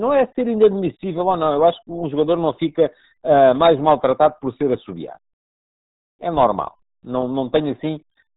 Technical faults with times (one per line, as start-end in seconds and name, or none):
0.00-8.37 RealAudio 14.4 codec